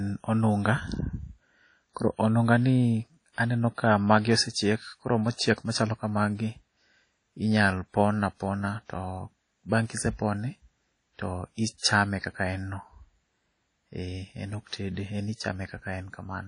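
WMA compression, likely the cause, runs through the whole speech clip: nothing is heard above 10.1 kHz, and the codec damage is plainly audible. A transform coder with long blocks smears its quantisation noise over tens of milliseconds around each syllable and discards weak spectral lines, which fits a low bitrate near 32 kbps. The result is a ringing, washy texture, with hiss that swells and fades along with the speech.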